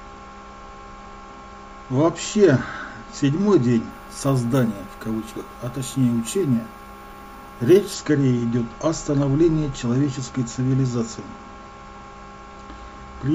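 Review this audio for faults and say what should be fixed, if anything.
Imaging from sample-and-hold upsampling runs from 3.91 to 7.94 s. Each sample was repeated with no smoothing filter, which fits a jump from 16 kHz to 48 kHz. Mirror copies fill 8 to 16 kHz, about 22 dB down. They are heard as a metallic fizz that follows the sound. Prevent it by upsampling through a proper interpolation low-pass filter.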